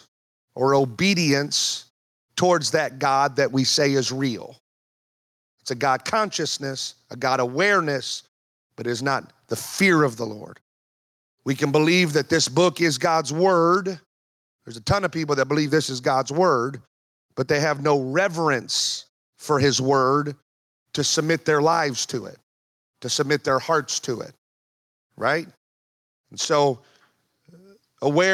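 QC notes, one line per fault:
Throughout, gain pumping: the level ducks about 5 dB under each loud sound, likely from excessive mic gain driving a fast limiter.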